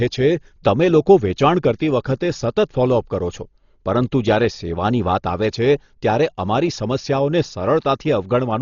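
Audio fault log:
throughout: Dolby Digital compression, likely, fitting 32 kbps; nothing above 7 kHz, and starved bands fill with rough, fluttering dither noise, unlike a simple low-pass.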